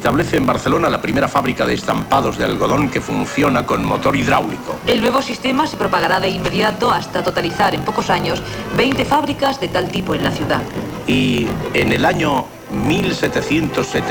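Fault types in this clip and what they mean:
Block size mismatch (truncated): one stage hands over longer blocks than the next stage reads, so the tail of every block is discarded. Throughout the clip this produces a steady 50 Hz buzz, set by the rate of the cut points, and the sound plays about 1.16 times faster than normal while keeping roughly its normal pitch. That ratio fits a writer producing 1024-sample blocks and a reader taking proportionally fewer.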